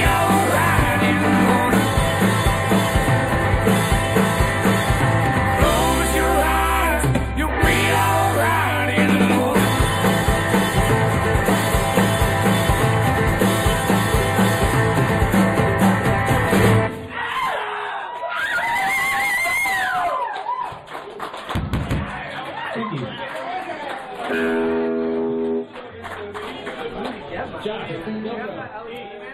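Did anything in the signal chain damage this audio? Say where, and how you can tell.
Yes. Channel delay (comb filtering) runs throughout: a fixed hollow, phasey dullness with a first notch near 5 kHz, which fits one channel lagging a few samples in the driver path before summing to mono.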